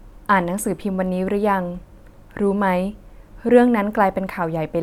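A speech recording, with nothing technically wrong with it.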